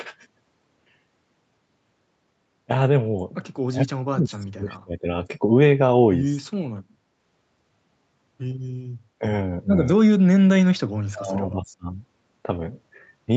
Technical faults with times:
3.68-5.08 speech suppressed in double talk
6.47-6.68 speech suppressed in double talk
9.19-9.23 speech suppressed in double talk
9.96-10.24 speech suppressed in double talk
10.71-11.97 speech suppressed in double talk

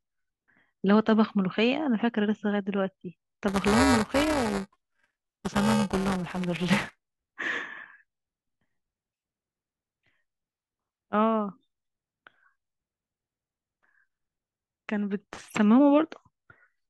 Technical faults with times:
3.48-7.05 buffer tearing

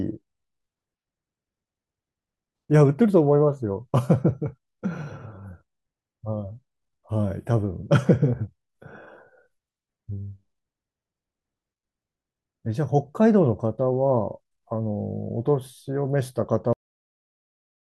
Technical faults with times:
16.73-17.89 cut-off end

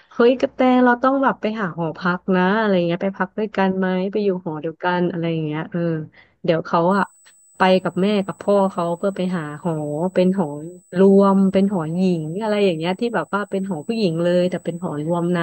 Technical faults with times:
6.91-15.42 USB whine

